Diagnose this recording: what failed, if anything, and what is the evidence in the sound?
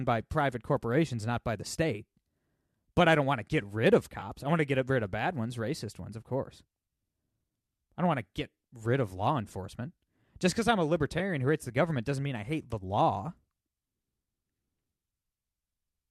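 The codec stage shows AAC frame loss with concealment at 4.20–4.23 s and at 11.19 s. Gaps of about 20 ms and 10 ms, which fits two frames and one of the likely AAC-ELD codec, were filled from the last good spectrum, giving brief smeared, noisy patches. A spectrogram shows thin vertical smudges where the harmonics blur, and the waveform keeps its level rather than dropping out.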